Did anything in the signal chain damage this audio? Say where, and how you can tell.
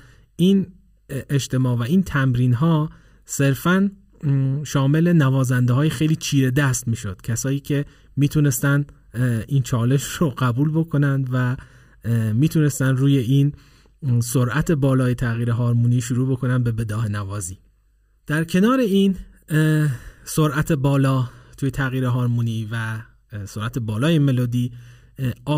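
Yes, there's channel delay (comb filtering) through the whole clip. One channel arrives roughly 0.7 ms late before the mono sum, so the speech sounds hollow and phasey, with fixed notches starting around 700 Hz and repeating evenly up the spectrum.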